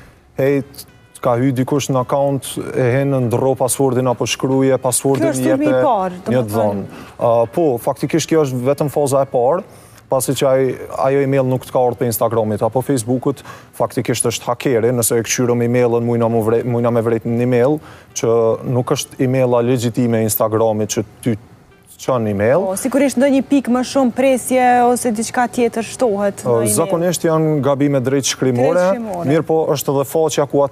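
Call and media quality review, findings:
Call and media quality review findings: no faults found in this clip.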